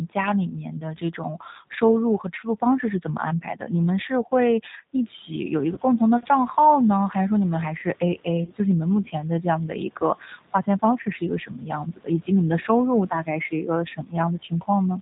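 G.729 codec damage runs through the whole speech clip, a plainly audible roughness and synthetic edge with nothing above 4 kHz, consistent with an 8 kbit/s model-based voice coder. VoIP packet loss concealed by the speech codec occurs at 5.74–5.79 s and 8.44–8.52 s, where each gap fits a single lost 30 ms packet. The decoder stretches its last pitch and filter into a fading buzzy tone or coloured noise, and the voice stays weak briefly afterwards. Room noise, which rises by about 11 dB around 5 s and then sits about 23 dB below the speech, belongs to the recording space and is not a system fault.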